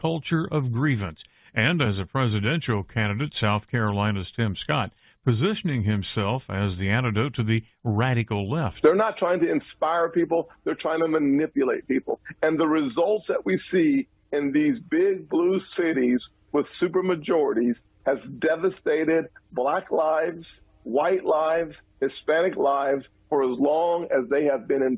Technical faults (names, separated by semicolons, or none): none